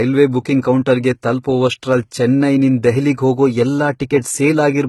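Speech throughout, with a sharp ceiling at 11.8 kHz: on a spectrogram the energy stops along a flat line, with the first encoding's artefacts still present beneath it. This is likely low-bitrate audio saved at a high bitrate, fitting a very low-rate HE-AAC source re-encoded as MP3.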